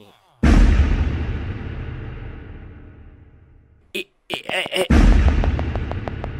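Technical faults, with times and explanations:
4.34–6.25 s, train of clicks: a steady ticking sets in at 4.34 s and runs to 6.25 s, about fifteen near-identical pulses spaced evenly at 6.3 per second, each standing well above the surrounding audio, roughly 10 dB over it. Because every pulse has the same sharp shape and arrives on a fixed beat, it reads as mechanical popping laid over the sound rather than part of it. The likely source is interference from nearby equipment or a faulty connection or power supply.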